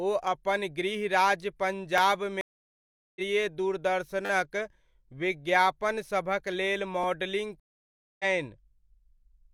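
Stream reconnect at 2.41 to 3.21 s and 7.60 to 8.25 s: the connection dropped, leaving about 0.75 s and 0.6 s of silence before a fresh decoder picked up the speech roughly half a second and 0.3 s further on.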